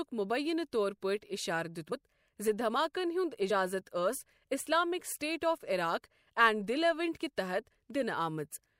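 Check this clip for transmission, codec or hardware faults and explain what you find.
Two brief skips in the speech, both compressed frames skipped. At 1.91 s, just before "زِ دھماکَن", the speech lurches forward, losing about 70 ms, which fits roughly three 24 ms frames going missing. At 3.49 s a smaller jump drops about 20 ms, consistent with a single frame.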